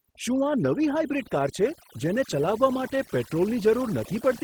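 From the first moment to the end, the speech carries overdone noise removal. A noise reducer set far too aggressively has pulled individual frequency bands down or out wherever they sat close to its idea of the noise floor, and the softer parts of the voice went along with them. Gaps fall to near silence flecked with twinkling specks. Plain low-level hiss or a steady hum would stay put, but this residue flickers band by band.

Layered over that for the whole clip is Opus voice compression, running in the hybrid arrangement: a linear-prediction speech coder carries the lower band, and a transform layer fills in above 8 kHz. The damage is plainly audible. The voice takes on a hoarse, slightly robotic edge from coarsely coded excitation, which fits a bitrate around 16 kbps. It can be told apart from lower-rate narrowband coding because the top end is not cut off. Content reaches up to about 20.1 kHz, so this is roughness rather than a muffled, band-limited sound.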